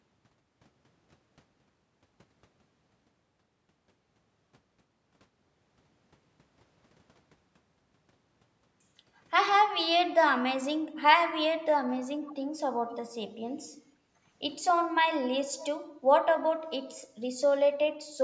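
At 12.27 to 12.35 s and again at 12.89 to 12.96 s, brief scraps of echo leak appear. A faint copy of the speech returns about 0.47 s late, roughly 25 dB below the main speech, most likely because a loudspeaker on the far end fed the speech back into its microphone and the echo canceller missed part of it. The fixed delay marks it as a true repeat rather than room reverberation, which would trail smoothly behind the speech.

From 13.78 to 14.21 s, the background is gated by the echo canceller. For about 0.4 s the room tone dips by up to 15 dB while the far-end loudspeaker is active, then recovers.

At 15.57 to 15.67 s, the echo leak returns with the same 0.47 s delay, now louder at about 20 dB below the speech.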